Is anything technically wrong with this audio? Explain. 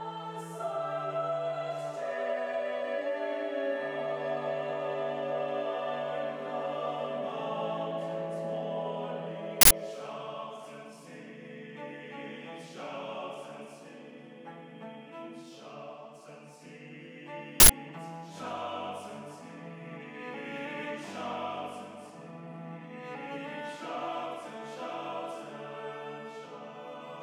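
Yes. An uninitialised buffer appears twice, at 9.61 s and 17.60 s, each lasting about 93 ms. Leftover memory was played as audio, giving short bursts of digital noise. The length fits a 4096-sample block.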